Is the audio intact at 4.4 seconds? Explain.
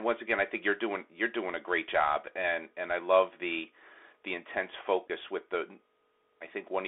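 No. At 4.4 seconds, as throughout, the speech passes through a Bluetooth CVSD headset codec. It sends a 64 kbps one-bit up/down stream, confining sound to roughly 300 Hz–3.5 kHz with granular hiss and scratchy sibilants. A spectrogram shows nothing above 3.5 kHz.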